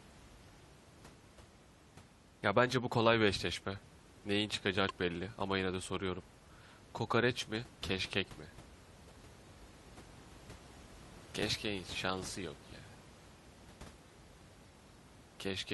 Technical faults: damaged data in a compressed stream

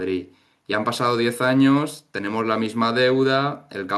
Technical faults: none

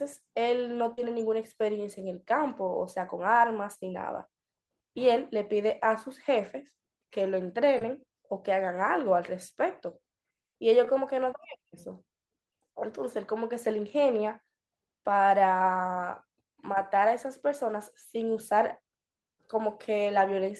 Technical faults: short concealed packet loss

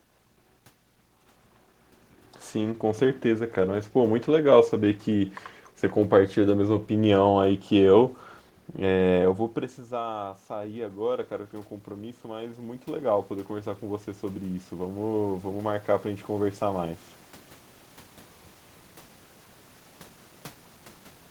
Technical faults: automatic gain rising

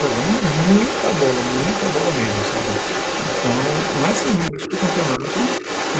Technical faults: other side's voice leaking through; speech suppressed in double talk

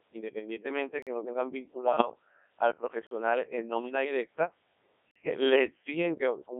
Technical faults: Codec 2 vocoder; gap between chunks; bit errors on digital voice radio

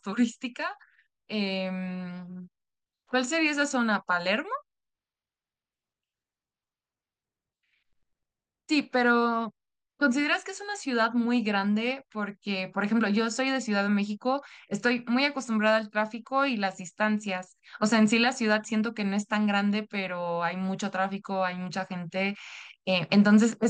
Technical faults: none

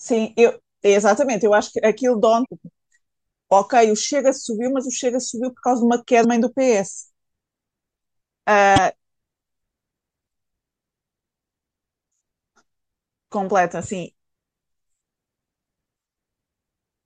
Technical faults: damaged data in a compressed stream

